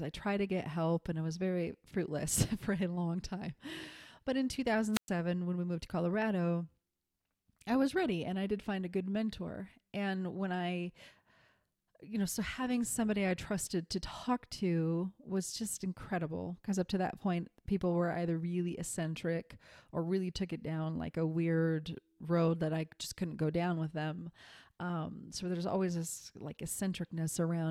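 At 4.92 s the sound thins into a short burst of hiss, then drops to near silence for about 112 ms before the speech returns at 5.09 s. This is a wireless microphone squelch dropout: the analogue FM radio link weakened, the receiver's noise rose as the carrier faded, and its squelch circuit shut the output off until the signal recovered strongly enough to reopen the audio path.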